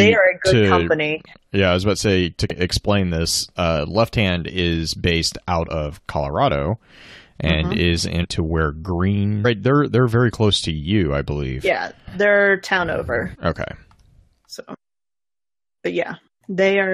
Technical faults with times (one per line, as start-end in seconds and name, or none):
2.50 damaged data in a compressed stream
5.68 damaged data in a compressed stream
8.23 damaged data in a compressed stream
9.44 damaged data in a compressed stream
13.34 damaged data in a compressed stream